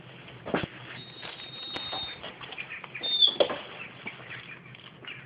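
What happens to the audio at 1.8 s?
A single loud pop from 1.76 to 1.79 s, roughly 15 dB above the surrounding audio. It is likely an electrical pulse from a switch, plug or static. Unlike a dropout, the sound carries on uninterrupted underneath this brief thump.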